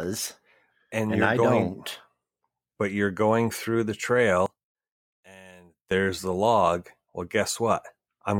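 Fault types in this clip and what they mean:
One channel inverted: From 4.46 to 5.91 s the speech suddenly drops by about 23 dB and becomes faint. Full level returns after that. The likely cause is reversed polarity on one stereo channel. The shared centre content then cancels when both channels are summed.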